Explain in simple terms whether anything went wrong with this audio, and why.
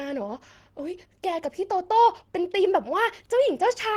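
Nothing went wrong here: the speech comes through steady and intact, with no dropouts, glitches or distortion anywhere in the recording.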